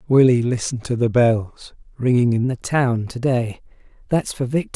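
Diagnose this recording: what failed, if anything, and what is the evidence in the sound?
Wrong sample rate at the playback stage: from 2.44 s the speech runs about 1.09 times fast and roughly 1.5 semitones high, which fits 22 kHz material played at 24 kHz. Pitch and tempo move together, unlike a pitch shift.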